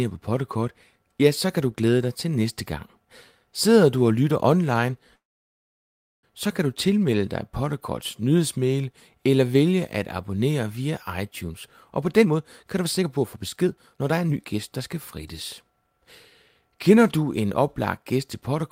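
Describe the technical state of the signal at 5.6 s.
A call audio freeze spans 5.15 to 6.25 s, after "du og lytter online". Packets were likely held up in transit, emptying the jitter buffer; a brief tail gives way to about one second of silence, then the audio resumes intact at "så kan du tilmelde", now delayed about 1.08 s.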